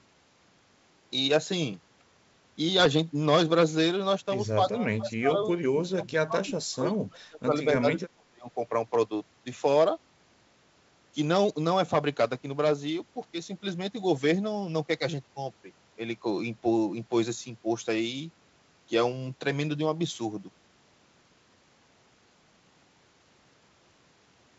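From 2.80 to 2.88 s, bit errors on an ADPCM link produce a short cluster of pops and a rough, gritty burst, with the level jumping briefly. The error rate is low, around a third of a percent. Each flipped bit throws off the decoder's step size and predictor, so the damage rings on for a few milliseconds instead of clicking once. Unlike packet loss, there is no gap or repeated sound, only corrupted sound that recovers within a few frames.

Between 4.71 and 7.55 s, the speech dips, dulls and breaks into pieces for about two seconds in total, falling by about 25 dB at its deepest. The same happens again from 7.79 to 8.49 s for about half a second, reaching about 30 dB. The likely cause is speech suppressed in double talk: with both sides talking, the echo canceller could not separate this talker from the loudspeaker echo and pulled the level down. A network dropout would leave abrupt silences or glitches. 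Outside these spans, the G.722 wideband coding at 64 kbit/s works normally, keeping speech clear up to about 7 kHz.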